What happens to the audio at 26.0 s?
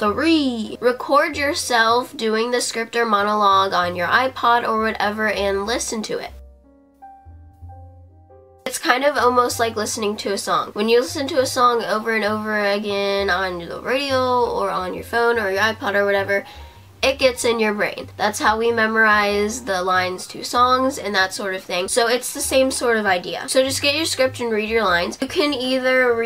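Nothing goes wrong at 26.0 s; the audio plays through that moment intact, with no audible fault.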